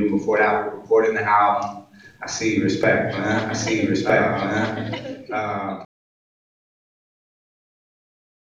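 A doubled audio track runs from 3.49 to 5.85 s: a full-band copy about as loud as the original trails by roughly 1.5 s, starting and stopping abruptly without decay or room colour, likely from a second, slower capture path or an edit holding two out-of-step copies.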